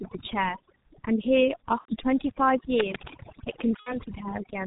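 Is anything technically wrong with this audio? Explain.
Yes, there are a few problems stacked up here.

The overdone noise removal runs the whole way through this speech. The suppressor cut frequency bands hard wherever they sat near its noise estimate, so the background drops and breaks up into twinkly specks, and the quieter parts of the voice go with them.

The G.723.1 codec is also present throughout, and it's heavily damaging. Nothing gets through above 4 kHz, and the slow-updating voice model leaves the speech muffled and hoarse with smeared consonants. That's consistent with a low-rate coder running at roughly 6 kbit/s.

There are two dropouts where VoIP packet loss was concealed by the speech codec: one from 1.79 to 1.95 s and one from 3.80 to 3.99 s. In each, the decoder extrapolated from its last pitch and filter while lowering the gain, and the voice stays weak afterward. The first gap sounds about 90 ms long, which fits roughly three 30 ms frames, and the second sounds about 60 ms.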